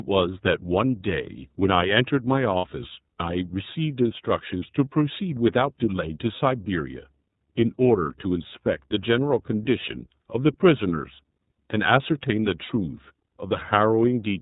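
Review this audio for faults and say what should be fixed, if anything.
The iLBC codec coding runs throughout: a hard band edge at 4 kHz on a spectrogram, a slightly rough, synthetic speech texture consistent with 30 ms frames around 13.33 kbps. Prevent it by recording or transmitting with a wideband codec.

Lost iLBC frames at 2.58–2.64 s (60 ms) and 12.66–12.70 s (30 ms): the decoder repeats the last pitch cycle with noise, giving a brief buzzy held vowel. On a waveform this shows as suspiciously periodic cycles, and on a spectrogram as smeared, static harmonics. Prevent it with jitter buffering, forward error correction or a more reliable network path.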